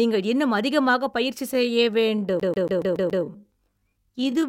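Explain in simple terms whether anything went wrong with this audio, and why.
Right after "இன்னும் அதிகமாகப் பயிற்சி", at 1.49 s, the speech suddenly slows to about 0.6 times its normal pace and stays that way to the end. The pitch doesn't drop as it would on a slowed tape. That points to a time-stretched section. Software was likely used to lengthen this part while keeping the pitch, filling the extra time by repeating tiny slices of sound.

From 2.40 s to 3.24 s there is a fast, even stutter. The same 140 ms snippet plays six times in a row, with a brief cut at each jump back. This is a CD stuck on one turn. A scratch knocks the laser back to the same spot on every rotation of the disc, so that short piece keeps repeating until the player gets past it.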